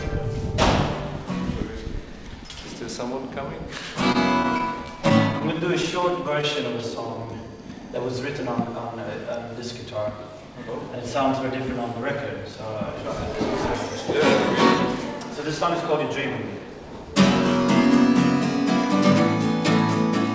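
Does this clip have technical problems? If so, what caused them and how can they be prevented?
Yes. Scattered short gaps occur between 4.02 and 6.45 s: roughly fifteen lost or late packets, each patched by extending the preceding audio, about 150 ms concealed in total with the longest hole near 30 ms, heard as brief ticks and smears. Better network quality of service or forward error correction would prevent them.

A jitter buffer slow-down runs from 5.92 to 7.91 s. The receiver, short of reserve audio, repeated small pitch-period-sized pieces to add 132 ms, so the audio plays at 94% speed with unchanged pitch and sounds stretched. A steadier network path or a larger initial buffer target would prevent it.

Jitter buffer speed-ups appear at 10.20 to 11.47 s and 15.35 to 16.68 s. Excess buffered audio was trimmed in small slices, about 100 ms at 106% speed and then about 40 ms at 102%, so the audio runs faster at normal pitch, with the first stretch sounding hurried. 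Reducing packet bunching on the network would prevent them.

The audio also has no content above 8 kHz, which fits the G.722 wideband call codec it passed through.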